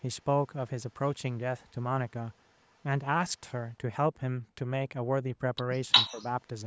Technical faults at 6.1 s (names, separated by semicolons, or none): echo leak; speech suppressed in double talk